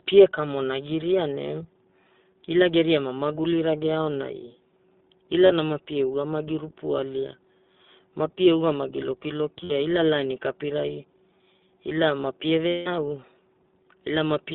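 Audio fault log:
Throughout: iLBC codec. The speech is confined to a narrowband line of roughly 200 Hz to 3.7 kHz, so nothing above about 4 kHz survives. Each 20 ms frame's excitation is coded on its own, and at this rate the damage is plainly audible as a rough, slightly synthetic voice.
5.46 s, 9.64 s and 12.68 to 12.88 s: lost iLBC frames. Packets dropped out for 40 ms, 60 ms and 180 ms, and the decoder filled each gap by repeating the last pitch cycle blended with noise. Each gap sounds like a held, buzzy or breathy vowel, and the longest one fades as it goes on. Because each frame decodes independently, the voice recovers almost immediately after each gap.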